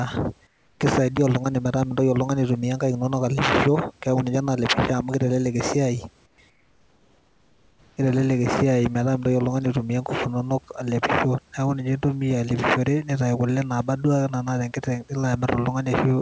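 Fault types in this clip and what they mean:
Comfort noise in place of the background: In three pauses the real room noise turns into a steady, featureless hiss, about 4 to 6 dB quieter. The sender likely stopped transmitting during silence, and the receiver filled each gap with synthetic noise.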